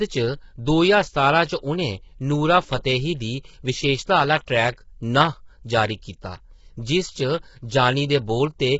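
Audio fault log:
throughout: low-delay AAC compression, likely AAC-ELD; heavy damage fitting roughly 16 kbps leaves grainy speech, noise between harmonics, and a spectrogram empty above 7.7 kHz.
4.46 s: pre-echo; quantisation noise spread across the block leaks backward, showing as an 11 ms hiss smear before a softened attack in the waveform.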